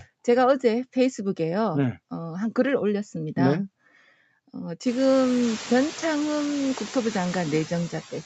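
Throughout the speech, noise suppressor artifacts pull steady background noise down about 15 dB between phrases and let it return beneath them, including after the room noise rises around 5 s.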